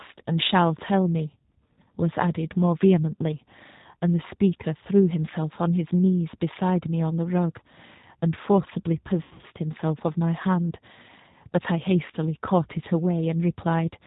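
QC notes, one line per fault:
Throughout: G.729 codec at 8 kbit/s. The speech is rebuilt from a vocal tract filter, a pitch predictor and a few pulses per 5 ms, with nothing above 4 kHz, so it sounds plainly rough, synthetic and band-limited.
9.23 to 9.46 s: VoIP packet loss concealed by the speech codec. About 160 ms went missing across 200 ms, the longest gap 80 ms. The decoder stretches its last pitch and filter into a fading buzz or coloured noise, and the sound stays weak briefly after packets return.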